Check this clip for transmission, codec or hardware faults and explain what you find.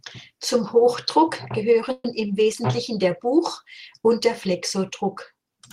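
One transmission fault is present. From 1.91 to 2.05 s, a call audio freeze: packets were likely delayed, emptying the jitter buffer, so about 130 ms of fading buzz fills the gap before the speech resumes intact.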